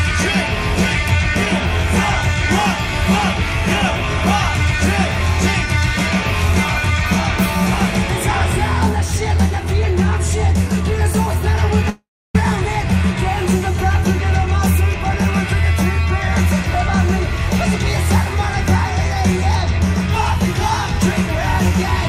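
At 11.90 s the sound gives way to a fading buzz built from what came just before, then about 310 ms of near silence, and the audio resumes at 12.35 s with roughly 450 ms simply gone. This is likely a long network dropout, where the receiver concealed the gap before giving up. On a spectrogram the last frame's spectrum smears forward and dims, then leaves an empty vertical band; the waveform shrinks to a flat line before jumping back.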